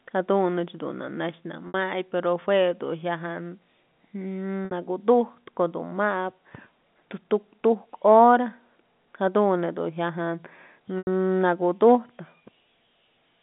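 Speech over a G.711 telephone line with packet loss and pitch repetition at 1.68 s and 4.65 s (60 ms each) and at 10.98 s (90 ms). Each gap is bridged by repeating the last pitch period, which fades out over about 50 ms into silence before the speech returns with a short cross-fade.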